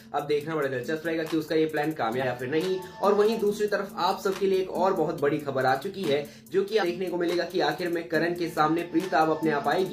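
The audio has damaged data in a compressed stream at two points, 2.19 to 2.25 s and 6.78 to 6.84 s. Each is a short burst of about 60 ms. There, corrupted bytes made the decoder misread frames and lose sync until it found the next valid frame header.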